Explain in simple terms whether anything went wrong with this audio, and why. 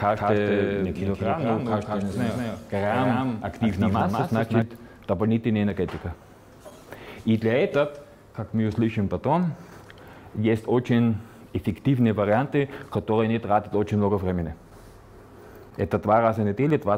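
A doubled audio track runs from the very start of the clip until 4.62 s. Every sound is heard twice: a second, equally loud copy trails about a fifth of a second behind, with no fading or room echo to it, and at 4.62 s the copy cuts off abruptly. The likely cause is that the same audio reached the mix by two routes, one slower than the other, so both copies played together slightly out of step.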